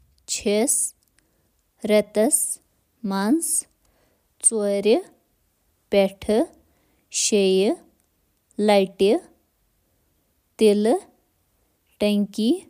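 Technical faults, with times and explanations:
Nothing stands out here, so there's no technical fault to point to anywhere in this speech recording.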